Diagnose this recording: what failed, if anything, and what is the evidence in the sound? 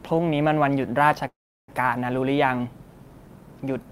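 Network: a call audio freeze at 1.27 to 1.70 s, likely a starved jitter buffer. The spectrogram shows the last frame smeared into fading bands, then 0.35 s blank. The speech resumes delayed, with nothing lost.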